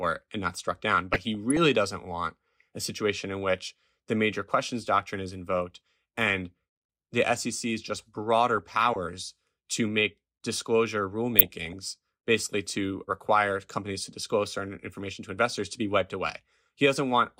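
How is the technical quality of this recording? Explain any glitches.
Four short bursts of DAB burbling break up the speech: at 1.13–1.57 s; at 8.57–8.96 s, after "just broader"; at 11.26–11.73 s, between "to make disclosure" and "basically to require companies"; and at 15.52–15.63 s, between "disclose certain information to" and "to be wiped away". Bit errors of around a third of a percent slip past the error correction and corrupt individual sub-bands. Wrong samples put short blips of noise into single bands, and bad scale factors that get through make a band jump in level for up to a frame.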